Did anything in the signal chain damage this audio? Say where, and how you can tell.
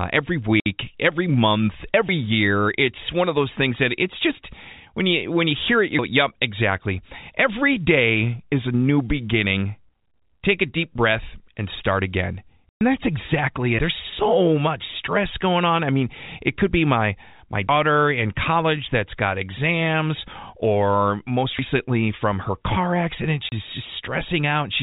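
Yes, the network dropped packets and the receiver filled them with silence. Hard-edged holes sit at 0.60–0.66 s, 12.69–12.81 s, and 23.49–23.52 s after "from her car". They last 60, 120 and 30 ms, which fits 30 ms packets.

The audio also has missing stretches between chunks, likely from a buffering or recording stage working in 4 s chunks. Skips occur at 2.09, 5.99, 9.89, 17.69 s (between "could be my my" and "in college that's got") and 21.59 s (between "got exams or most" and "from her car"). Each loses about a tenth of a second and is spliced shut with no silent gap, which separates it from the packet loss.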